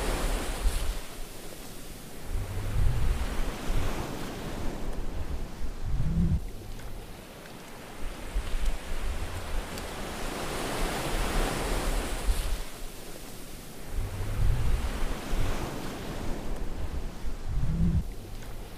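Nothing technically wrong turns up anywhere in the audio, so there's no fault to point to and nothing to explain.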